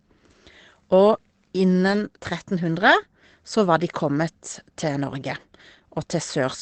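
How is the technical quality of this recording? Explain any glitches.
The recording has three short patches of lost packets rebuilt from error correction, at 1.07 to 1.13 s, 1.87 to 2.01 s and 2.83 to 2.97 s. Each missing stretch, about 40 ms at first and then 80 ms twice (which fits two, then four, lost packets), was replaced by a coarse low-bitrate backup copy carried in the following packet. There is no dropout, just brief rough, noisier grain. On a spectrogram these appear as smeared, blotchy patches with a raised noise floor. The waveform stays continuous through them.

The audio passed through a call codec, which sounds like Opus at a modest bitrate. Content stops near 8 kHz, so a spectrogram shows a flat ceiling there.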